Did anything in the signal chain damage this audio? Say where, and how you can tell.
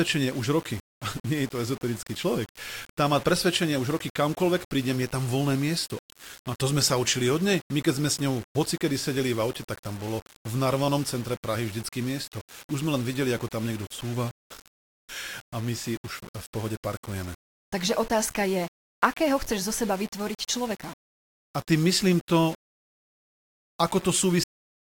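Yes. At the sample-format conversion stage, the speech was likely reduced to very few bits by plain rounding with no dither. Throughout the clip, a grainy distortion sits roughly 20 dB below the signal and moves with it, roughest on quiet syllables and word tails, where the sound sputters between a couple of steps. That signal-following grit, rather than a steady hiss, is the mark of low bit depth without dither, and its level fits a 6-bit word length.

At the buffer or playback stage, the last stretch of audio was never written out, giving a cut-off end. At 24.44 s the speech stops mid-sound and falls straight to digital silence, with no natural decay or room tail, and that silence runs to the end of the clip. An abrupt edge like that, arriving in the middle of a sound instead of after it has died away, shows the final buffers were dropped.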